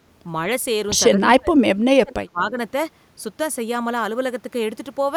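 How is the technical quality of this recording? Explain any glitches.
The recording has one clear fault: speech suppressed in double talk, from 1.14 to 2.58 s. Over about a second in total within that span, the speech level is pushed down, at worst by roughly 30 dB. The likely cause is an echo canceller that, with both sides talking at once, could not tell the near talker from loudspeaker echo and attenuated everything.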